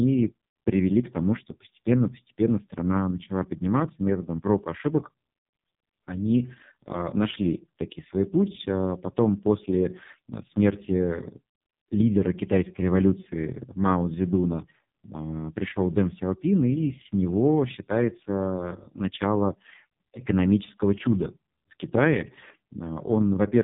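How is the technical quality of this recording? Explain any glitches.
Pretty rough, I'm afraid: the whole recording has gone through the AMR narrowband mobile codec, and heavily.

Throughout, nothing above 3.8 kHz survives, and the speech sounds buzzy and synthetic, which fits AMR-NB's lowest mode near 4.75 kbps, rebuilding the voice from a few pulses.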